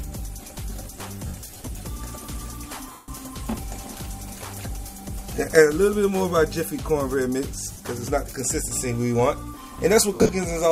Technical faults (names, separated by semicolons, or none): lost LE Audio frames; GSM signalling bursts